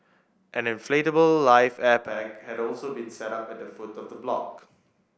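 Speech clip with a switch to a distant microphone from 2.09 s to 4.58 s. The sound abruptly turns roomy and hollow, loses bass, drops about 10 dB and carries room noise roughly 30 dB below the speech, likely from a lost close-microphone feed, before snapping back.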